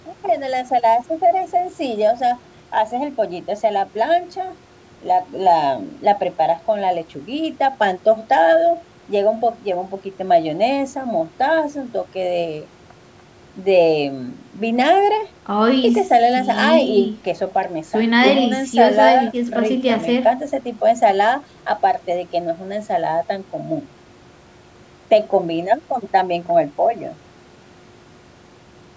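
No technical faults can be heard anywhere in this speech recording. It has passed through a call's microphone processing, which removes the lowest bass and leaves nothing above 8 kHz.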